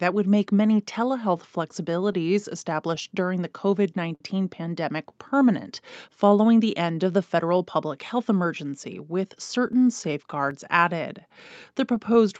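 The sender's clock runs roughly five percent slow against the receiver's, a clock drift between sender and receiver that lasts the whole speech clip. The jitter buffer keeps draining because audio arrives a little too slowly, so the timing never settles.

From 1.12 s to 12.31 s the receiver answers with repeated timing corrections, stretching short pieces again and again so the buffer doesn't run dry. Playback drops to about 96 percent speed, adding roughly 400 ms overall, heard as faint hiccups and a slightly dragging, uneven tempo.

Between 1.54 s and 2.15 s, scattered short gaps appear where about four packets went missing or came late. Each hole, the longest around 10 ms, was patched by continuing the preceding sound, leaving tiny ticks or smears in otherwise clear speech.

At 4.15 s to 4.22 s, a short stall from a late packet empties the buffer. The receiver holds the last sound for 55 ms until the packet arrives, then resumes where it left off. 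That moment sounds drawn out, with a slight buzz or dip, though nothing is lost.

From 9.73 s to 10.53 s, about five more scattered short gaps, none longer than about 7 ms, are concealed the same way. They bring brief clicks and smearing again, heard through the Opus call path's band limit at 8 kHz.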